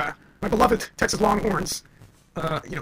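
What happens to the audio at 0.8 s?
At 0.8 s the speech carries a block size mismatch (truncated), present across the whole clip. Each block, which fits a 512-sample write, loses its tail before being read, producing a buzz at 138 Hz and speech running 1.6 times fast with its timbre kept.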